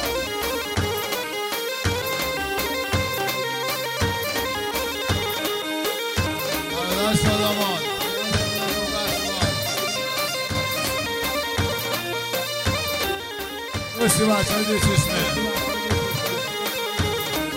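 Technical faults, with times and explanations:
10.48–10.55 s and 13.15–14.01 s, one channel drops out: the level abruptly falls by about 6 dB, first for 75 ms and then for 0.86 s, and snaps back just as suddenly. One stereo channel likely went silent, so the mono sum kept only the other channel's half of the shared sound.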